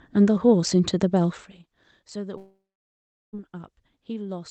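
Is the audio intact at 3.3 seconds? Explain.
No, 3.3 s falls inside a long network dropout from 2.37 to 3.35 s, likely lost packets. A fading concealment buzz gives way to silence, a blank spectrogram gap and a flat waveform.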